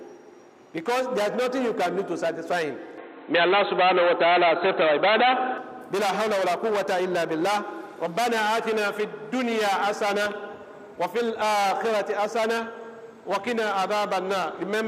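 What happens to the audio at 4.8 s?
At 4.8 s the sound is in the middle of a dull, boxy stretch running from 2.98 to 5.58 s, with nothing above 4.1 kHz, a level shift of roughly 5 dB and a faint new background noise far below the signal. The likely cause is an input switched to a poorer device. It differs from a plain low-pass filter because band, tone, level and noise floor all change together, abruptly, with no gap at either switch.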